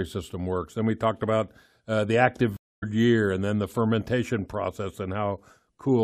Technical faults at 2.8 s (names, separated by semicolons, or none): stream reconnect